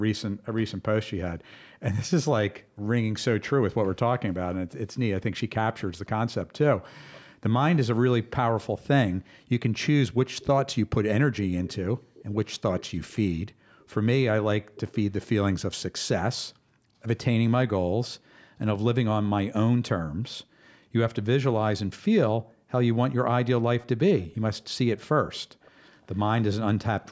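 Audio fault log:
0.32–2.85 s and 9.15–22.7 s, background gated by the echo canceller: while the far-end loudspeaker played, the canceller suppressed the microphone by up to about 40 dB. The room sound dips out, around half a second in the first span and roughly three seconds in the second.
6.05–7.21 s, 10.39–15.02 s, 18.03–18.07 s and 23.8–26.18 s, echo leak: a faint copy of the speech returns 344 to 368 ms late, about 30 dB down, rising to about 20 dB down in the 10.39–15.02 s span. The likely cause is loudspeaker pickup that the far end's canceller did not fully remove.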